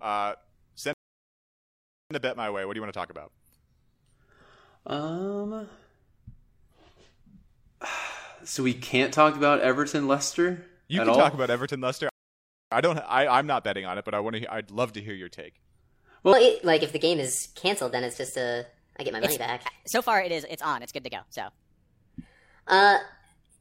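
At 0.93 s the speech cuts to silence until 2.11 s, adding about 1.17 s, and again from 12.09 to 12.72 s, adding 0.62 s. These are rebuffering stalls: playback ran dry and waited for more data. Unlike a dropout, nothing is missing, because the speech resumes exactly where it stopped.

From 16.33 s to the end, the speech runs 1.32 times too fast and sits roughly five semitones higher, hurried and thin. This section at the wrong speed likely comes from playback against the wrong clock. Tempo and pitch rise together, which separates it from a pure pitch shift.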